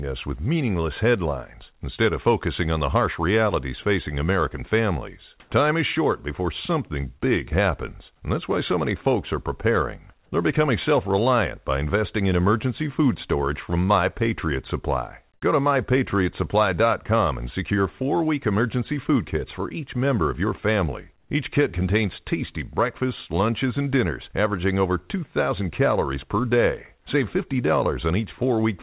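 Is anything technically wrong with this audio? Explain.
Yes, there are two related faults in this speech clip, heard against audio that carries nothing above 4 kHz, as a narrowband telephone-style call path would.

Comfort noise in place of the background appears at 5.4 to 5.5 s, 15.34 to 15.42 s and 21.18 to 21.3 s, each lasting 80 to 120 ms. The likely cause is discontinuous transmission. The sender stopped sending during pauses, and the receiver filled the gaps with synthetic noise. The real room background gives way to a flat, textureless hiss. It is about 8 dB louder at 5.4 s and about 3 dB quieter at the other two. Unlike a dropout, the gap is filled with noise rather than silence.

The onset is clipped by the voice detector at 15.4 s, where about 20 ms of the start of speech is missing. The detector was likely slow to register that speech had resumed, so that opening stretch was never sent and the synthetic noise ran on in its place. 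The sound begins abruptly, with no soft attack, straight out of the comfort noise. That sets it apart from a fade-in or an edit cut, which would show a ramp or true silence instead.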